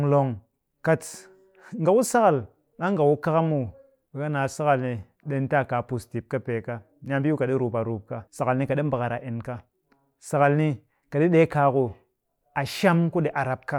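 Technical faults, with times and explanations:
No technical faults can be heard in this speech recording.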